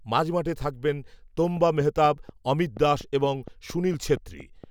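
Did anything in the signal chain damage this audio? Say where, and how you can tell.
Yes. From 1.57 s to 4.65 s a train of clicks runs over the speech, about fifteen near-identical pulses at a steady 4.24 per second, peaking about 5 dB above the signal and ticking through pauses as well. Each pulse adds a sharp transient without removing or repeating any audio, which rules out buffer dropouts. The fixed spacing and uniform shape point to a periodic source, likely interference coupling into the analogue wiring or a faulty connection or power supply.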